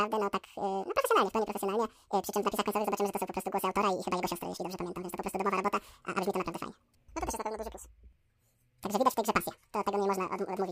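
Throughout, the speech is read two samples at a time. It plays at double speed, an octave higher.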